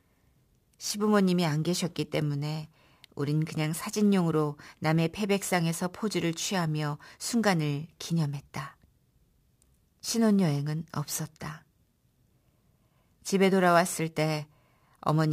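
A hiss and grainy roughness ride on this speech recording for its whole length, swelling on loud and bright, sibilant sounds and vanishing in the pauses. It is sample clock jitter: timing wobble of around 7 microseconds leaves an error roughly 25 dB below the signal.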